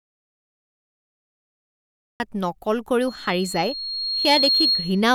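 An audio dropout to silence runs from the very start of the clip to 2.2 s; the gap is already under way when the clip begins. For those first 2.2 s there is nothing at all, not even room tone. The likely cause is that the input was lost, through a disconnected device, a failed link or a mute, while recording carried on. The speech then simply appears mid-flow at 2.2 s, and whatever came before is gone.

A loudspeaker feedback squeal starts at 3.07 s and lasts until 5.11 s, close to the end. The microphone is picking up a loudspeaker it feeds, and at 4.3 kHz the loop's gain exceeds one, so that single frequency keeps reinforcing itself on every pass. It is heard as a thin, piercing tone that swells over roughly a second and a half, until it sits around 5 dB above the speech and dominates it.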